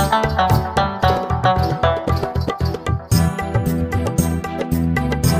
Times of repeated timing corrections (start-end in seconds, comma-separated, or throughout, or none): 0.13-4.84